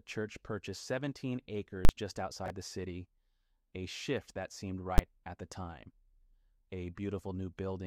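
At 1.85 s there's a 40 ms block of invalid numbers at full scale, where a calculation blew up and pinned the output to its limit, so you get a loud pop in and out with silence between. Around 2.46 s a 20 ms chunk turns up one chunk late, chunks out of order, which gives a brief jumbled stretch. Then at 4.98 s another invalid-number block hits full scale, only 10 ms this time, so it's a single sharp bang.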